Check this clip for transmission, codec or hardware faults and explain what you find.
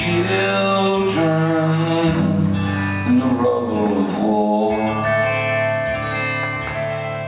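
One fault runs through the whole clip: gain pumping. The gain swings by around 10 dB, leaving the dynamics squashed. The likely cause is input gain set far too high, with a fast limiter or compressor clamping down on each peak. The audio is band-limited to about 4 kHz, as expected for a narrowband call codec such as G.711 mu-law.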